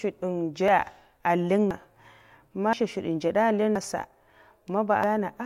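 At 0.68, 1.71, 2.73, 3.76 and 5.04 s the speech jumps ahead by about 100 to 150 ms, likely a dropped buffer (overrun). Audio is lost with no inserted silence, unlike an underrun's gap.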